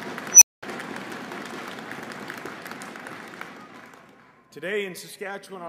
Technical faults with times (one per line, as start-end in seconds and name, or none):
0.31-0.63 unstable filter